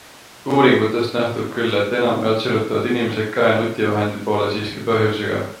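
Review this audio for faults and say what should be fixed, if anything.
No faults can be heard anywhere in this speech recording. There is nothing here that needs to be fixed.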